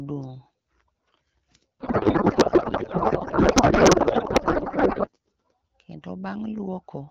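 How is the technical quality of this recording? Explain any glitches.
The recording has one serious glitch, a codec payload misread from 1.80 to 5.09 s. The sender packed AMR wideband frames octet-aligned, but the receiver unpacked them as bandwidth-efficient, so every field landed in the wrong place. The decoder rebuilt garbled noise and warble that barely tracks the speech, until the framing agreed again. Outside that stretch, the AMR wideband (HD Voice) coding sounds clear, which fits a rate around 12.65 kbit/s.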